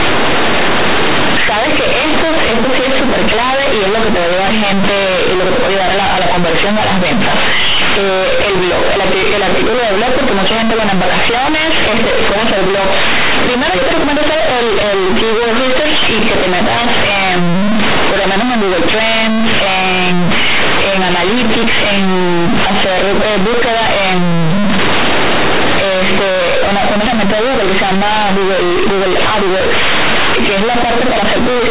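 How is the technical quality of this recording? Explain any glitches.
The recording is badly damaged by harsh distortion from start to finish. Throughout, companded audio is read as linear: mu-law bytes are played as plain 8-bit samples without expansion, so every sign change jumps across half the range. Speech turns into loud, buzzy distortion, and the pauses fill with heavy noise. Unlike clipping, quiet passages come out as loud as peaks. The underlying G.711 telephone coding behaves as expected, with nothing above 4 kHz.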